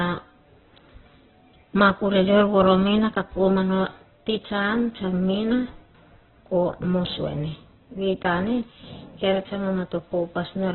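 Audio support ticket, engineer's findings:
Opus compression throughout. Speech muffled, rough, grainy; nothing above 4.2 kHz. Likely narrowband Opus near 8 kbps: band energy kept, fine detail noise-filled.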